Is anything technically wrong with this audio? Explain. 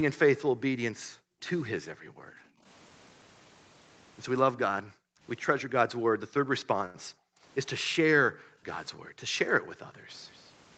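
Yes. The background noise is gated by the echo canceller at 0.5–0.61, 0.92–2.64, 4.7–5.21, 5.96–7.43, 7.84–9.21 and 9.54–10.06 s. Each time the canceller ducks the microphone by up to about 40 dB, so the room sound drops out and then returns.

At 6.85–6.97 s there is a short stall from a late packet. The jitter buffer ran dry and held the last sound for 88 ms, so nothing is lost but that moment is drawn out.

At 10.32–10.48 s a faint echo leak follows the speech. It sits about 30 dB down with a 232 ms lag and is likely residual loudspeaker pickup that the far-end canceller failed to remove. Above 8 kHz there is no content at all.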